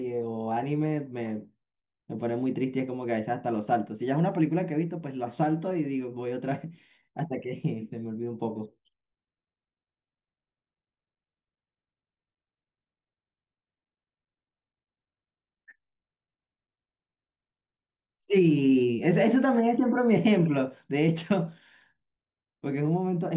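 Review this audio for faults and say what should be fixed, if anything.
Nothing here needs fixing; it's an ordinary speech recording with no faults to chase down, so you can leave it as it is.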